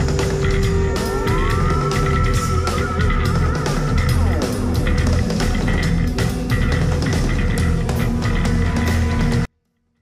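From 9.45 s to the end at 10.01 s, the sound stays clean but falls about 48 dB, nearly inaudible: a 24-bit alignment error, low-packed 24-bit samples read as full 32-bit words.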